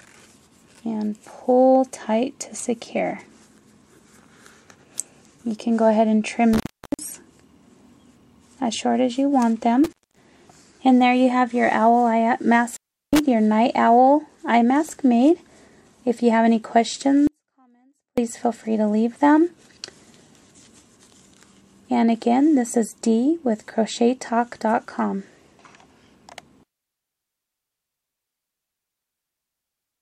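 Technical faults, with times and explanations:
6.53–7.04 s, 9.84–10.25 s and 12.70–13.19 s: intermittent contact. The sound cuts out three times, for about 0.39 s, 0.23 s and 0.36 s. Each break has crackle at its edges. A loose plug or cable opens and closes. The rough metal contact makes that crackle. While the line is open, only a faint hiss remains.
17.27–18.18 s: audio dropout to a faint residue. The sound stops abruptly and returns just as abruptly after about 0.9 s. It is not a pause or a fade. A faint trace of the sound stays in the gap, roughly 40 dB below normal. The likely cause is a lost source signal while the downstream path stayed live, so only a weak leak of the signal remains audible.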